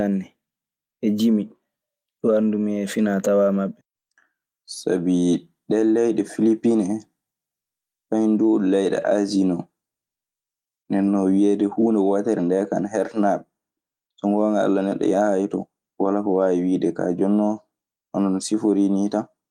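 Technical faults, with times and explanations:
9.01–9.07 s, lost packet rebuilt from error correction: around 9 seconds there's no dropout, but the speech turns briefly grainy and a bit noisy for about 40 ms, which fits two lost packets. Each missing packet's content came from the low-bitrate backup copy tucked into the following packet, Opus in-band FEC, so the decoder filled the hole instead of going silent. That thin copy is why the patch sounds rougher than its surroundings.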